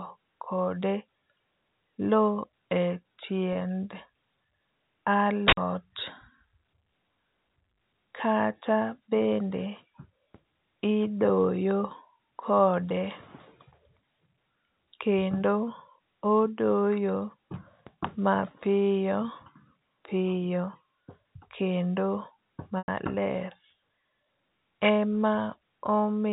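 Packet loss with pitch repetition occurs at 3.53–3.55 s and 22.78–22.88 s. The receiver bridged about 20 ms, then 100 ms, by repeating the last pitch period: first a brief buzzy hold, then a fade toward silence.

An uninitialised buffer at 5.48–5.57 s played leftover memory as samples. The result is a 93 ms blast of digital noise, which fits a 4096-sample block.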